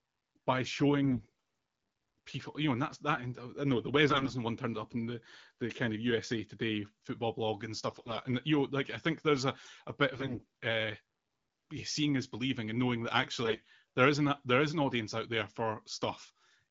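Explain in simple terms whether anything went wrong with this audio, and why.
Yes. Five short bursts of AMR bit errors make the speech hoarse and gargly at 1.04–1.27, 4.09–4.34, 7.87–8.18, 10.15–10.45 and 13.43–13.64 s. Garbled data scrambles the fine detail of the voice, though pitch and loudness hold.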